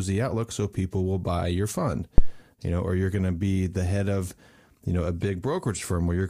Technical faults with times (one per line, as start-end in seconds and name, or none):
2.18-2.34 phantom power thump